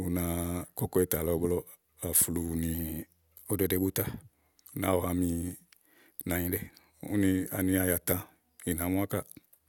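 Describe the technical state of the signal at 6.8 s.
At 6.8 s the speech sits inside a drift correction step running from 6.35 to 6.94 s: playback jumps about 6% faster, raising pitch by roughly a semitone (102 cents), then snaps back. The likely cause is clock-matching software stepping the rate to rebalance its buffer.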